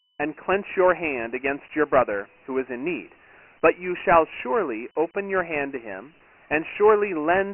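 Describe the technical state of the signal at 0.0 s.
At 0.0 s the speech already carries Dialogic VOX ADPCM damage, lasting the whole clip. Coarse 4-bit step coding adds gritty hiss tracking the speech. Nothing sounds above 2.9 kHz, fitting 6,000 samples per second.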